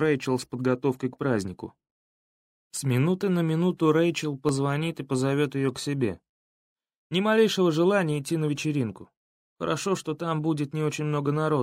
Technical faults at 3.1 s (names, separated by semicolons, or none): none